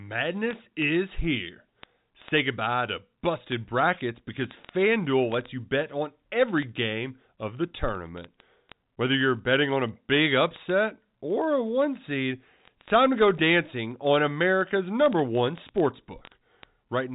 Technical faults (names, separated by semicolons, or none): word clock ticks